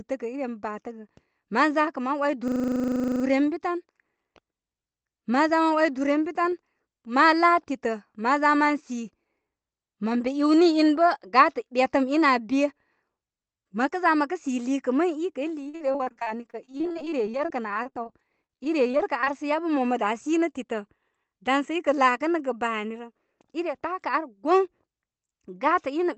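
At 2.48 s the speech locks up in a system hang loop until 3.24 s. The driver stalled while the hardware kept replaying the same 40 ms chunk of its buffer, 19 times at 25 Hz, so you get a buzzy, rattling stutter with hardly anything actually lost.

From 15.63 to 18.07 s there's repeated packet loss. Dozens of short holes, the longest 48 ms, get patched by stretching the last bit of sound, covering about 27% of that span. It comes out choppy and robotic. It happens again, more lightly, from 18.43 to 19.28 s, with gaps up to 26 ms and about 18% concealed. It clears just before "sə yabə mo mə". Throughout, the Opus call path's top end stops around 8 kHz.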